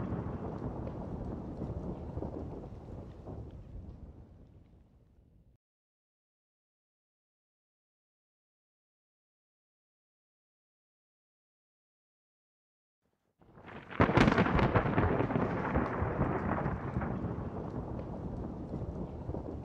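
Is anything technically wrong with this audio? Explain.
No, nothing technically wrong can be heard anywhere in this audio.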